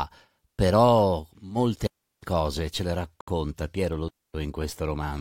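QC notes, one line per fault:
1.87–2.23 s and 4.09–4.34 s, digital wireless dropout: the receiver lost too much data and muted, leaving clean holes of about 358 ms and 256 ms. On the waveform they appear as flat near-zero stretches with very short fades and no noise bursts on either side. On a spectrogram they are empty vertical bands.
3.21–3.28 s, gap at a join of encoded pieces: a 69 ms silence splits continuous speech, which then resumes exactly where it stopped. Separately encoded pieces kept their start delay and last-frame padding. The waveform shows a near-abrupt hole, and the spectrogram shows a narrow blank column with slightly smeared edges.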